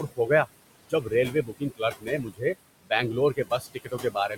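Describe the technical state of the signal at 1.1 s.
Speech cut by the noise suppressor covers 0.82 to 1.12 s, so 1.1 s falls near the end of the affected stretch. The suppressor mistook part of the speech for steady background and turned it down along with the noise. The gain drops by as much as about 22 dB, and roughly 150 ms of the span is affected in total. The quieter parts of the speech there sound swallowed and faint, as though soft consonants or word endings were being pulled under.

Noise suppressor artifacts are also present at this moment, as they are across the whole clip. The suppressor lowers the bands it classes as noise frame by frame, cutting the background by about 20 dB. The residue of the room noise, which sits about 14 dB below the speech, rises and sinks with the speech and can take on a fluttering quality.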